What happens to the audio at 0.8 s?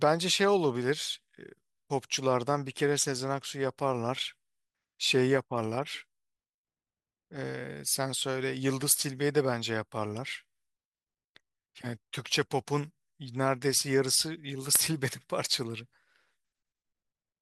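Nothing goes wrong at 0.8 s; the speech plays through that moment intact, with no dropout, click or distortion.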